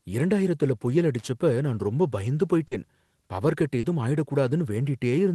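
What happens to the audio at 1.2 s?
A loose or dirty contact in the connection is making and breaking rapidly from 1.19 to 1.28 s, chopping the signal on and off. The result is a short, irregular burst of loose connector crackle, a scratchy rattle laid over the speech.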